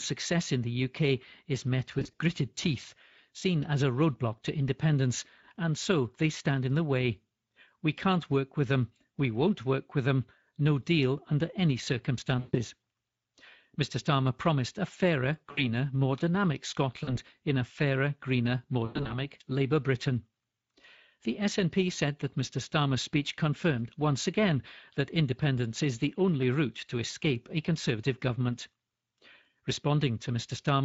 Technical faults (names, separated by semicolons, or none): Speex codec; VoIP packet loss concealed by the speech codec